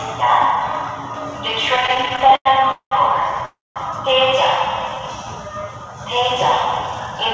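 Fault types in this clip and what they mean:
Repeated stalls (stutter): Between 1.76 and 2.93 s the packets kept coming late, the jitter buffer emptied eighteen times and each gap was bridged by extending the last sound, the longest for 200 ms. About 455 ms is filled in, close to 40 percent of that stretch, with nothing lost. A spectrogram shows repeated smeared, fading patches and the waveform a choppy, stretched run.
Call audio freeze: From 3.45 to 3.78 s the sound halts, the last fragment carried on as a fading buzz that then drops to silence for about 210 ms, before resuming where it stopped. A delay of about 304 ms is inserted, likely from packets held up in transit. It appears as a flat gap in the waveform.
Jitter buffer slow-down: Between 4.66 and 5.01 s the receiver repeated single pitch periods to rebuild its reserve, adding 42 ms and playing at about 90 percent speed with unchanged pitch. 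The sound is slightly drawn out. A spectrogram shows stretched, evenly repeated harmonic bands with no gap.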